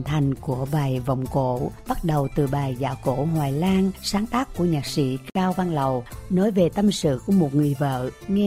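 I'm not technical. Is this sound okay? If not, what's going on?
No, there's one fault. At about 5.30 seconds the sound briefly drops out, a silence of about 55 milliseconds, ending at 5.35 seconds. The edges are softened, and the sound then picks up exactly where it left off. This is a gap at a join of encoded pieces. The audio was saved as separate chunks that were then stuck together, and the little stretch of silence each chunk carries at its start and end was left in.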